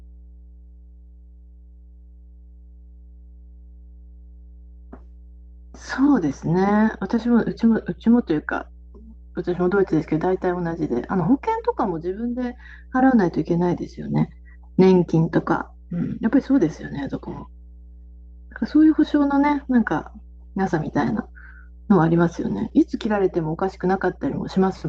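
Speech runs over a steady mains hum at 60 Hz for the whole clip, sitting about 25 dB below the voice, most likely from a ground loop or nearby transformer. On a spectrogram it shows as an unbroken horizontal line at 60 Hz with low harmonics above, under the speech.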